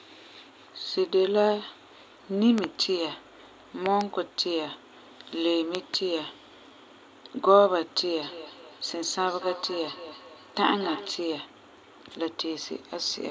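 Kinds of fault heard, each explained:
Loud pop: Sharp double pops at 2.58, 3.86 and 5.75 s stand well above the speech, likely from a sudden voltage step such as a plug or switch.
Feedback echo between two devices: From 8.2 to 11.2 s the speech comes round again about every 200 ms, thinner and about 14 dB down, looping through a second device.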